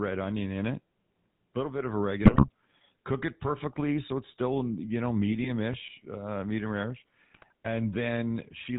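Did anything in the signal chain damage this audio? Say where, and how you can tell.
Yes. GSM full-rate codec damage runs throughout this speech at the codec stage: buzzy, gravelly roughness and no content above 4 kHz, the pulse-driven vocal-tract model that fits 13 kbps full rate.

GSM bit errors at 2.23–2.48 s, 5.32–5.48 s and 7.34–7.52 s are network faults: squawks, pops and gargling where corrupted filter, pitch or gain values distort whole frames.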